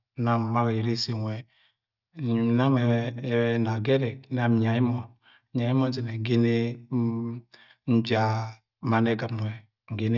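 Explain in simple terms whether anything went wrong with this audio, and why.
Nothing went wrong with this audio, because no fault can be heard anywhere in the recording.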